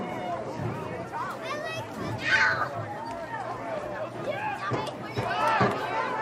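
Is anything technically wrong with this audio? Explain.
No, nothing in this audio points to a technical problem; the signal holds steady throughout, with no audible disturbance, interruption or damage anywhere in the clip.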